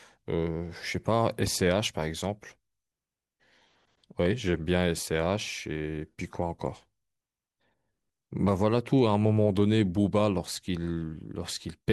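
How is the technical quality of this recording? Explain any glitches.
No glitches or technical faults can be heard anywhere here.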